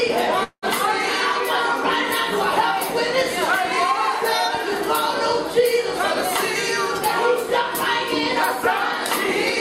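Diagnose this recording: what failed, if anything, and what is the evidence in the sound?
A call audio freeze occurs from 0.43 to 0.66 s. The sound stops moving forward, and the last moment is held as a fading buzz. About 90 ms of that stretch sits near silence. The audio then picks up exactly where it stopped, with nothing skipped. The stage is the network feeding the call's receive buffer. The likely cause is delayed packets that let the jitter buffer run dry. That fill adds 191 ms, so everything afterwards plays that much later.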